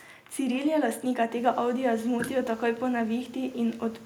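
A speech recording with nothing technically wrong with it.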